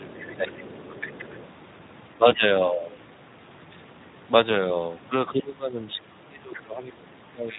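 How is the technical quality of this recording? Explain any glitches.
The recording has clear technical problems. It is speech with audible codec damage throughout and echo-control faults near the start and at the end.

Speex codec damage runs through the whole clip. The speech sounds noisy and hoarse, with a rough, buzzy edge. The damage is plainly audible, which fits a bitrate around 11 kbps. At that rate the codec has too few bits to model the voice's excitation, so fine detail is replaced by coarse approximation. The upper band sounds more like shaped noise than real speech. Anything above 8 kHz is only a shaped, noise-like fill.

Other side's voice leaking through appears twice. From 0.00 to 0.35 s, a second voice sits faintly under the speech, about 20 dB down. From 0.58 to 1.47 s, it returns louder, about 15 dB down. It sounds separate from the main talker. This is likely loudspeaker playback of the far end reaching the microphone. 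The echo canceller did not fully subtract it, so it passed through.

Speech suppressed in double talk also occurs twice. From 0.35 to 0.56 s, the voice dips by around 15 dB. From 5.32 s to the end at 7.58 s, it is pushed down by up to around 20 dB, for about two seconds in total. The speech sounds ducked. The likely cause is both sides talking at once. The echo canceller could not tell the talker from the echo, so it attenuated both.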